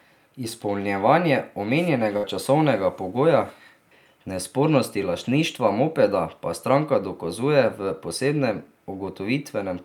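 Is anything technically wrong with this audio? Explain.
Yes, there's a burst of packet loss from 2.17 to 2.25 s, just before "časovnega pogoja". Several packets were lost or came too late, so the receiver stretched the last bit of sound into a held, fading tail for 58 ms, then jumped ahead, skipping 60 ms of speech.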